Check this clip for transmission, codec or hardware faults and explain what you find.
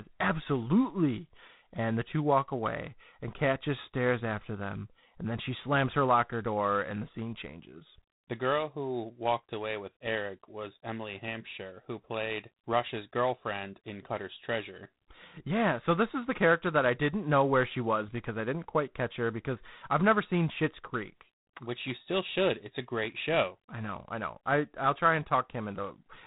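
One codec fault runs through the whole clip. G.726 ADPCM, throughout: each sample carries only a few bits of difference from an adaptive prediction, so quantisation noise surfaces as a harsh, rasping hiss that rises and falls with the speech, its coarseness pointing to 24 kbit/s. Nothing passes above 3.9 kHz.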